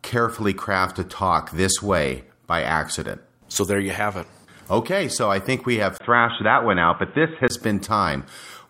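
At 5.98 s the speech drops out for a brief 20 ms gap. It returns dull and boxy, with nothing above 3.8 kHz. The level shifts by a few decibels, and a new background noise sits well below the speech. This is likely an input switched to a poorer device, such as a second microphone or a headset's call profile. Its narrower band and different noise floor carry the sound until 7.5 s, when the fuller tone returns.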